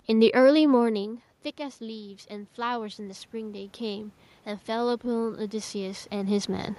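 From 0.78 s to 6.74 s the automatic gain rises gradually, adding about 11 dB to offset an input drop of about 13 dB as the talker moved back near 1 s. Speech and room noise swell together, the background lifting alongside the speech.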